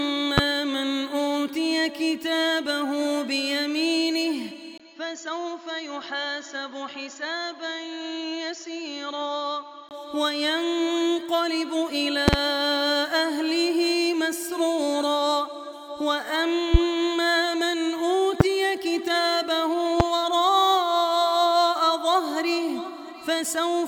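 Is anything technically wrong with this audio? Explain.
Yes, there are two kinds of problem: a series of loud pops and a stretch where the input seems to have switched to a poorer device.

The loud pops land at 0.38 s, 12.28 s, 16.74 s, 18.40 s and 20.00 s. Each is a sharp pop about 20 to 25 dB above the surrounding sound, which carries on underneath. The one at 12.28 s is a quick double pop lasting roughly 80 ms. It's likely a voltage step or spike, from a plug, a switch, static or a driver hiccup, hitting the signal chain.

The input switched to a poorer device from 4.78 s to 9.91 s. After a 20 ms gap at the switch, the sound goes dull and narrow, with nothing above about 7.1 kHz. It drops in level by roughly 5 dB and picks up a new, faint noise floor. The likely cause is the system jumping to another mic or a headset's call profile, then switching back.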